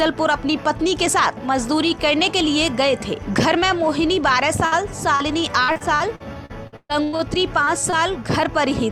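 At 4.65 s the sound freezes into a brief held tone or hiss that fades for about 60 ms, then picks up again at 4.74 s slightly further along. This is a burst of packet loss: several consecutive packets failed to arrive in time. The receiver extended the last good audio for about 62 ms, lowering its level as it went, and roughly 60 ms of the original was never heard.

At 5.16 s there is a quick smear lasting about 40 ms, ending around 5.22 s. This is short concealed packet loss: about 40 ms of audio was missing, so the decoder continued the previous sound across the hole and blended back into the real signal.

From 5.64 s to 7.21 s the audio turns choppy, with a robotic quality. This is repeated packet loss (robotic sound). Ten separate gaps fall inside this stretch, the longest about 130 ms. Each was patched by prolonging whatever came just before, so roughly a third of the span is synthetic filler and about 540 ms of the original is gone.

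Two more brief smears of short concealed packet loss follow, at 7.65 s and 7.90 s. Each is a gap of about 20 ms filled with a continuation of the preceding sound.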